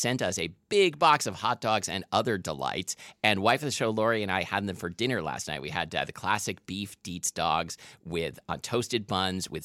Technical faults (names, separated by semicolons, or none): none